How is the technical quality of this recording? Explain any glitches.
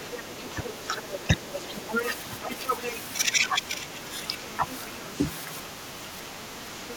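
The recording has clear echo-control problems on a speech call. The other side's voice leaks through from 0.0 to 2.98 s at roughly 10 dB below the talker, with faint scraps at 4.55 to 4.74 s and 6.91 to 6.96 s. The likely cause is loudspeaker echo that the canceller left in the microphone signal.

There is also speech suppressed in double talk at 0.31 to 1.83 s, 2.48 to 5.12 s and 5.68 s to the end. The talker dips by up to about 10, 15 and 5 dB in those spans, likely because the canceller turned everything down while both sides overlapped.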